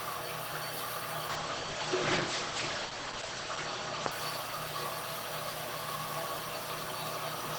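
A call bitrate drop runs from 1.29 s to 4.93 s in this recording of everyday sounds. The call's bandwidth estimate fell and the encoder was pushed down to a much smaller bit budget. The coarse coding at its lowest point, held for about 2.3 s, points to a fall from around 32 kbps to about 9 kbps. At that rate the codec trims the top end, so the sound is cut off above 8 kHz instead of reaching 20 kHz, and it turns muffled and rough until the bitrate recovers.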